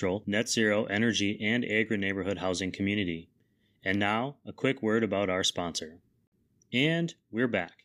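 Nothing goes wrong anywhere in this bit of speech, so there isn't a single technical fault to point to along the way.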